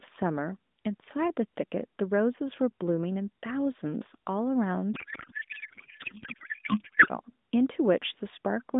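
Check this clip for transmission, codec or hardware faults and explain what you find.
One fault is present: a codec payload misread from 4.94 to 7.08 s. The speech turns into garbled noise and warble that barely tracks it. This fits octet-aligned AMR frames being unpacked as bandwidth-efficient, so the decoder reads its parameters from the wrong bit positions. The AMR narrowband path itself, limited to about 200 Hz to 3.7 kHz and consistent with the 12.2 kbps mode, shows only light coding damage outside that span.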